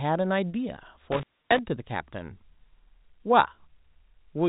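Intermittent contact between 1.12 and 1.59 s is the main fault in this speech clip, heard over a telephone-band path consistent with G.711 A-law. A loose cable or plug breaks the circuit, and the line stays open for a total of about 278 ms in that span. The speech drops away abruptly with crackle where the connection breaks and remakes, leaving faint hiss. Packet loss with pitch repetition falls inside that window, from 1.42 to 1.44 s. A 20 ms gap, which fits a single lost packet, is filled by repeating the most recent pitch period, giving a brief held, slightly buzzy tone instead of a hole before the sound resumes.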